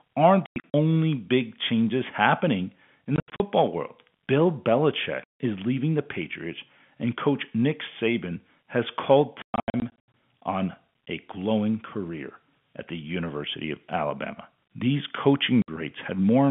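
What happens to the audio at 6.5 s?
Nothing goes wrong at 6.5 s: the speech carries on intact, with only the narrow, telephone-band character of the G.711 telephone coding it passes through.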